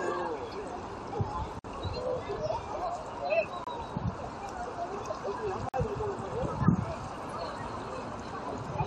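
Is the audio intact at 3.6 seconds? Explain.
No. A gap between stream segments opens from 3.64 to 3.67 s: the 2.0 s segment timestamps leave about 27 ms uncovered, and the player inserts a hard-edged silent hole without losing any sound.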